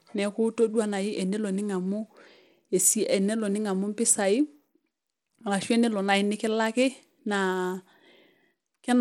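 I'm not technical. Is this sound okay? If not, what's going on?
No. The speech sounds gritty and dull from start to finish. The top end keeps flickering in and out, with a rough hiss riding on it. That points to Bluetooth SBC compression, likely squeezing the sound too hard to save data.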